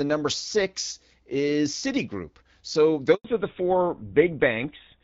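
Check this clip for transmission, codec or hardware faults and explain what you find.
Two faults occur close together, both tied to the call moving between networks.

A handover gap runs from 3.14 to 3.24 s. While the phone switched the call to another network, no speech frames came through for 100 ms. The speech fades out within a few tens of milliseconds and leaves silence until the new link picks up, so whatever was said in that tenth of a second is simply missing, not smeared or repeated.

Right after, from 3.24 s to the end, there is a fallback to narrowband. Up to that point the call had been carried on the AMR wideband (HD Voice) codec at 12.65 kbit/s, which sounds clear with only light coding damage. After the handover the new link carried it on a GSM full-rate codec at 13 kbit/s instead, and nothing above 4 kHz survives. The speech turns duller and rougher, losing the crisp upper range heard earlier in the clip.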